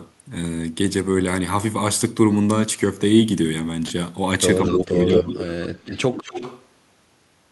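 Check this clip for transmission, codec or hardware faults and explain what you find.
Two problems are audible in this speech clip, both between about 4.6 s and 6.7 s, and both point to an echo canceller struggling with loudspeaker pickup.

Speech suppressed in double talk runs from 4.62 s to 5.38 s. The likely cause is an echo canceller that could not tell the near talker from the returning loudspeaker signal while both were active, so it attenuated everything. The voice sinks by around 15 dB at its deepest and stays pulled down for most of that stretch, sounding dipped and partly swallowed.

Echo leak appears three times: 4.66 to 4.85 s, 5.13 to 5.51 s, and 5.85 to 6.66 s. A far end playing the call over a speaker did not fully cancel what its microphone caught and sent it back, trailing the original by about 0.22 to 0.23 s. In the first two bursts the returned copy is roughly as loud as the speech itself. 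The last and longest one sits well below, around 10 dB down, and is heard as a fainter delayed shadow.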